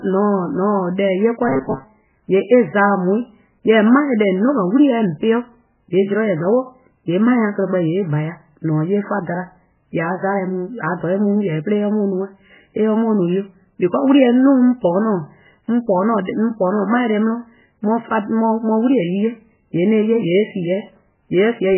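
Throughout the speech there is heavy damage consistent with MP3 compression, likely at a very low bitrate, around 8 kbps. Nothing is heard above 3 kHz. Weak frequency lines drop in and out between frames, giving a watery, swirly texture with smeared attacks.

From 1.49 to 1.85 s the speech turns into a rigid buzz at 133 Hz. This is robotic sound from repeated short buffers, likely caused by input arriving too seldom. A segment of about 7.5 ms replays for most of that stretch, and the real audio is skipped.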